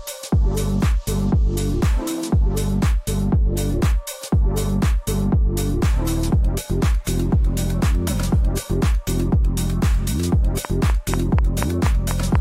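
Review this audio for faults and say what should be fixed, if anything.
From 10.65 to 12.36 s there is a train of clicks: about seven matching pulses at a steady 4.1 per second, likely interference. Their regular spacing sets them apart from random crackle. To prevent it, move the interface and cabling away from nearby electrical equipment and use shielded, well-grounded connections.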